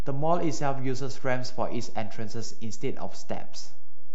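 Right from the start and through the whole speech clip there's a DC offset, with the waveform sitting off-centre by a constant amount, about -19 dBFS. You can't hear it as a sound, but it eats headroom and shows as steady energy at the very bottom of the spectrum.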